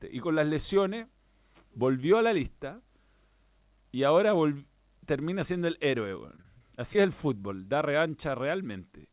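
From 6.36 to 6.97 s, repeated packet loss breaks up the speech. Packets drop out in quick succession, and each short hole (the longest about 24 ms) is patched by stretching the preceding sound. The stretch turns choppy, with pieces missing, just before "es el fútbol da".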